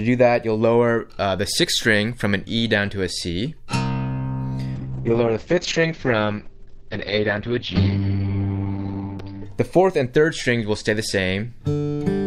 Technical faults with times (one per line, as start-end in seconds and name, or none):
4.77-9.49 call bitrate drop